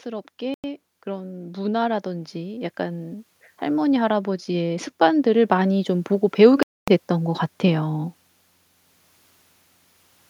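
Speech with an automatic gain rising from 0.05 to 8.15 s, lifting voice and background together by about 15 dB, a slow level climb rather than a deliberate fade. Two gaps of clean silence, at 0.54 to 0.64 s (97 ms) and 6.63 to 6.88 s (248 ms), then resume, which points to a likely Bluetooth stall rather than a codec dropout.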